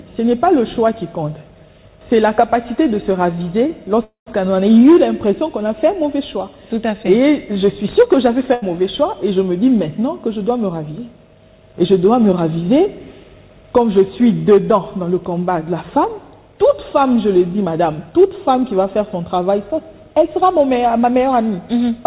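A call audio freeze runs from 4.04 to 4.28 s. The sound stretches into a held, fading tail and then drops to silence for about 0.13 s before carrying on from exactly where it stopped. That points to the likely cause: packets stalled in transit and the jitter buffer ran dry. Because the receiver filled the gap with a continuation, about 0.22 s has been inserted and nothing is lost. The rest of the clip now runs that much later.

A burst of packet loss follows at 8.54 to 8.64 s. Around 80 ms of consecutive audio never arrived in time to be played. The receiver concealed the hole by extending the last sound and letting it fade, which gives a brief buzzy or hissy smear. The audio then resumes further along, so the stretch that fell inside the gap is gone rather than delayed.

A jitter buffer speed-up affects 17.65 to 18.73 s. Too much audio had built up in the buffer, so the receiver trimmed short pitch-period-sized slices repeatedly to bring the delay back down. 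Playback runs at about 107% of normal speed with the pitch unchanged, and roughly 70 ms disappears in total. The passage sounds slightly rushed. Throughout, the band stops at 4 kHz, which fits a narrowband G.711 mu-law call path.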